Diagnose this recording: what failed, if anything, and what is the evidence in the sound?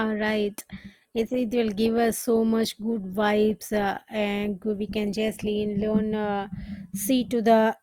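The fault lies in the playback stage, in the adaptive stream starting at a low bitrate. From 0.0 to 6.0 s the speech sounds dull, its treble missing or synthetic, with heavier codec artefacts. At 6.0 s it turns clearer at once, with no gap, consistent with a low Opus rate near 24 kbit/s stepping up to around 64 kbit/s once the connection was measured. Congestion throttling would degrade audio mid-stream; this only improves, and only from the start.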